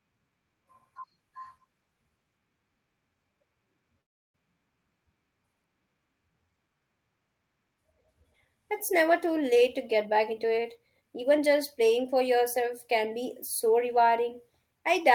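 At 4.01 s the speech stops and a 0.35 s gap opens, running to 4.36 s. This is a call audio freeze. The receiver briefly carries the last sound on before it falls away, and nearly all of the gap, about 320 ms, is silence. The likely cause is packets held up in transit until the jitter buffer ran empty. Unlike a packet-loss dropout, nothing is cut out: the speech picks up exactly where it halted, just 328 ms later than before.

From 9.55 s to 12.36 s, between "never too" and "can be so", there is a jitter buffer speed-up. The speech plays at about 112% of its normal rate while the pitch stays where it was. The receiver snips out short pitch-period pieces, taking roughly a third of a second in total, to draw down an overfull buffer. This sets it apart from a resampling speed-up, which would raise the pitch. Here the delivery just sounds hurried, heard through the Opus call path with its top end limited to 12 kHz.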